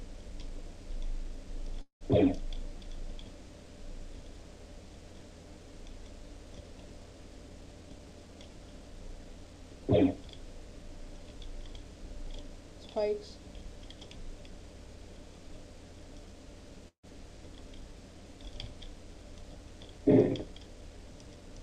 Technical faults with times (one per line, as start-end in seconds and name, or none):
1.81-2.03 call audio freeze
7.48-9.41 jitter buffer speed-up
16.88-17.05 call audio freeze
19.92-21.58 jitter buffer speed-up